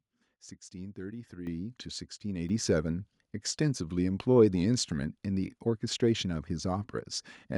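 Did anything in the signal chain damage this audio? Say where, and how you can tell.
Yes. Microphone volume stepped up in call processing, by about 8 dB at 1.47 s and about 4 dB at 2.49 s. Software raised input gain, so voice and background jump together.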